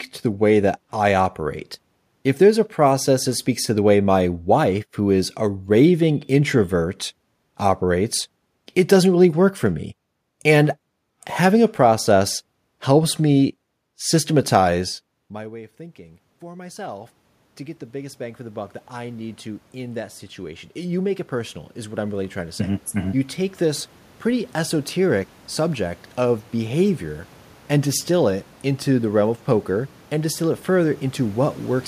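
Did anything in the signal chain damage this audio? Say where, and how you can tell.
Yes. From 15.15 s, just after "process helps me systematize", the voice and the room noise swell together until 27.8 s, before "distill it into the". This is automatic gain rising in call processing: the level fell about 24 dB, and the gain climbed about 22 dB to compensate.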